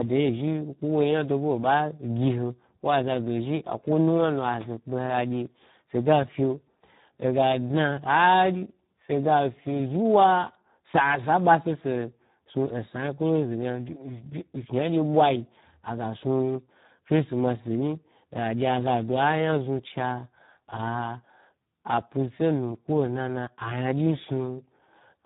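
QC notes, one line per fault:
Throughout, Speex codec: the speech sounds hoarse, grainy and partly robotic, with nothing above about 3.8 kHz, so it is narrowband and muffled. Speex builds each sound from a predicted vocal-tract filter driven by a coded excitation signal. Damage this heavy fits a setting near 8 kbps, where the excitation gets so few bits that the noisy approximation replaces natural voicing, leaving the buzzy, vocoder-like roughness heard across the clip.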